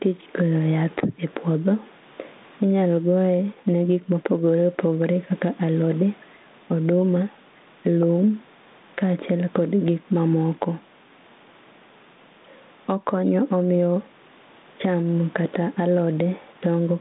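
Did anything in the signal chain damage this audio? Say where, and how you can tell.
Yes. Gain pumping throughout: the gain swings roughly 10 dB, pulled down under each loud syllable, likely from input gain set too high feeding a fast limiter.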